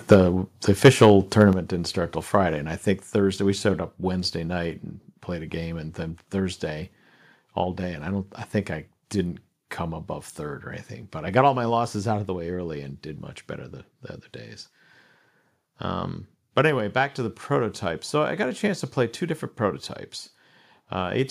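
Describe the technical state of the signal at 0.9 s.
At 0.9 s the microphone input is likely set too high, so from 0.85 to 1.06 s the speech peaks run about 6 dB past the converter's ceiling and their tops are sheared flat, with roughly 7 percent of samples clipped, giving a harsh, crackling microphone overload.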